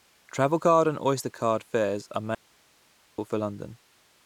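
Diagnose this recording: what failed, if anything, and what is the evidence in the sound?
The speech has an audio dropout to a faint residue. Right after "card fares are", at 2.35 s, the signal cuts out abruptly until 3.18 s. The 0.83 s gap holds only hiss, about 35 dB down. The path stayed live, so the likely cause is an intermittent analogue connection.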